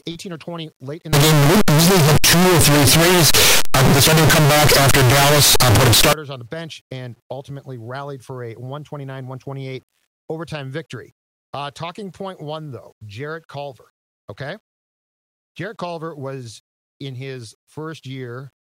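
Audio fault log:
1.13–6.13 s, signed and unsigned mixed up: for five seconds the sound becomes a very loud, harsh distortion, with quiet stretches as loud as the rest. The likely cause is the top bit of each sample being flipped on reading, which fits 8-bit samples, so every zero crossing leaps across the whole range. The waveform turns into a solid block, and the spectrogram fills with broadband energy from bottom to top.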